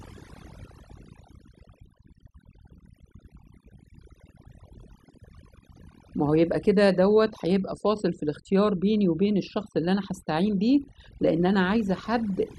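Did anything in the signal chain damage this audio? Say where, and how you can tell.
Yes: overdone noise removal throughout. Bands near the noise estimate are cut hard, leaving twinkling specks in near-silent gaps, and quiet parts of the voice are cut along with them.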